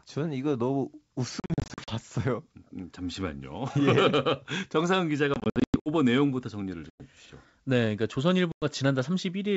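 Hard-edged silent gaps, each followed by speech that returns slightly distorted, break up the speech at 1.40–1.94 s, 5.34–5.88 s, 6.90–7.01 s and 8.52–8.65 s. This is packet loss on an ADPCM call, which throws the decoder's predictor and step size out of step with the sender's.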